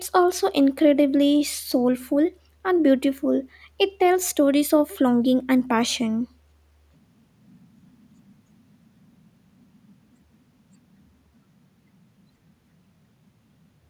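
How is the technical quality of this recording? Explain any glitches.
No technical faults are audible.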